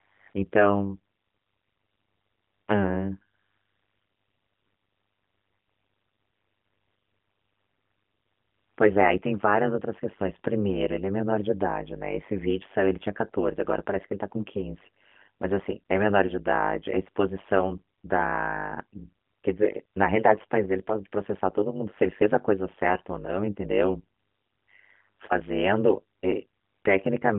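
Throughout the speech, frames were overlap-added with windows that do not sum to a constant gain, so the level swings by about 60 dB once per frame, around 100 times a second. This overlap-add ripple gives a harsh metallic buzz riding on everything.

From 0 s to 26.8 s, ten times, the phone's voice detection stopped sending speech frames and the receiver substituted AMR comfort noise. The gaps range from 40 ms to 5.44 s, the longest from 3.34 s to 8.78 s. The background becomes a smooth, synthetic hiss that switches in and out. The AMR narrowband line, with nothing above 3.4 kHz, is consistent with a 12.2 kbps mode.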